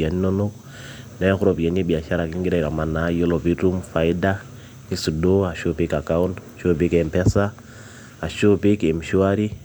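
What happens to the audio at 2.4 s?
Nothing goes wrong at 2.4 s; the speech carries on intact through that moment, with no dropout, click or distortion.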